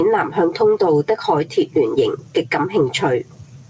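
Gain pumping runs through the whole speech clip. The level ducks by around 10 dB under each loud sound, flattening the dynamics. The likely cause is gain set far too high, with a fast limiter pulling it back. The G.722 call path leaves nothing above 8 kHz.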